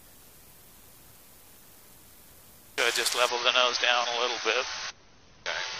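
The audio turns abruptly duller and grainier at 3.29 s and stays that way to the end, with nothing above 6.5 kHz and smeared, warbly artefacts. The switch carries no gap. It is an adaptive stream at a lower bitrate, dropping from MP3 at 128 kbit/s to 32 kbit/s.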